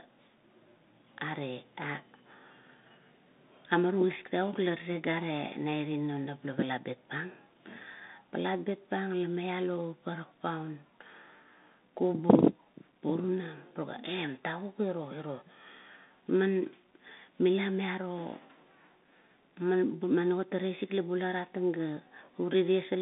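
Throughout, a Bluetooth CVSD headset codec's one-bit delta coding confines the speech to 200 Hz to 3.7 kHz, leaving scratchy s sounds over a granular hiss.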